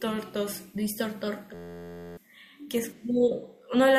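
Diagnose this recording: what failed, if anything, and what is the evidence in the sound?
A system hang loop at the driver or buffer stage. From 1.54 s to 2.17 s the speech stops and a steady buzz at 86.1 Hz takes over. One 11.61 ms slice repeats exactly, which fits a 512-sample ring buffer replayed while the system froze. About 0.7 s of audio is lost.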